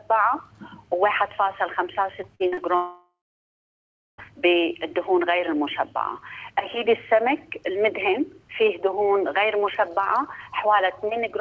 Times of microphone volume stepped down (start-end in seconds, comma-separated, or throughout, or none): none